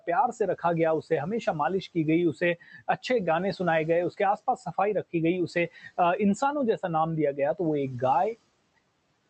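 At 2.6 to 2.82 s and again at 5.72 to 5.98 s, the speech goes faint and swallowed, dropping by about 14 dB at worst. This is speech cut by the noise suppressor, which took soft speech for background and pulled it down.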